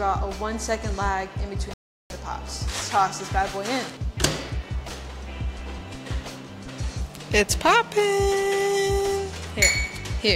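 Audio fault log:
1.74–2.10 s, playback stall: the sound cuts to silence for about 366 ms, then resumes. The player likely ran short of data or was blocked.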